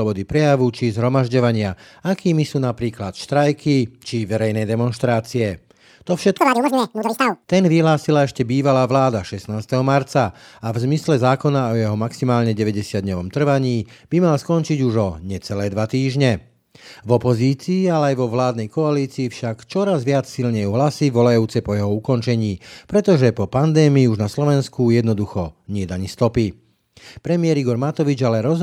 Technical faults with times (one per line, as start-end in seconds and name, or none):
6.38-7.44 audio read two samples at a time (double speed)